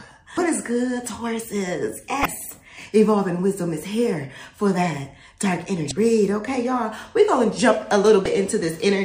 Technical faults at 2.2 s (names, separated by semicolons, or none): damaged data in a compressed stream